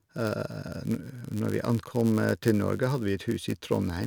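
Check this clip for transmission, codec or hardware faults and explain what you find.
One fault runs through the whole speech clip: a steady buzz at about 99.6 Hz, with the speech running very slightly slow, at 0.996 times normal speed. This is a block size mismatch (padded): each block written falls a little short of what the next stage reads, and zeros fill the remainder. That tiny silent gap in every block produces the buzz at the block rate and stretches the timing.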